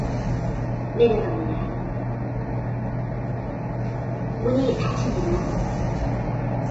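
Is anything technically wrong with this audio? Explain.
Yes. Throughout, low-delay AAC compression, likely AAC-ELD near 16 kbps, leaves the sound rough and grainy, with noise filling gaps and nothing above 7.8 kHz, unlike a clean low-pass filter.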